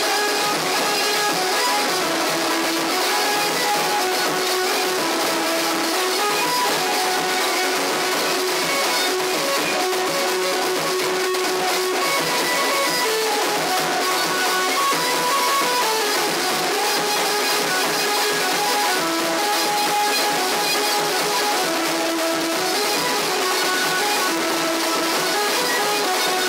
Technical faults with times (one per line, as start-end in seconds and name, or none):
none